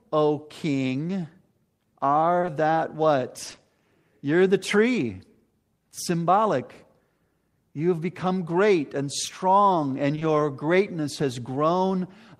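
Short concealed packet loss occurs at 2.41 and 2.45 s, at 3.47, 3.51 and 3.55 s, and at 10.15 and 10.19 s, between "great and strong and" and "greatness has". Each event is a 20 ms stretch of speech that arrived too late to decode. The receiver filled the gap by extending the preceding sound and then blending back into the real signal. The back-to-back losses give brief smears or wobbles, and a short consonant in a gap can drop out.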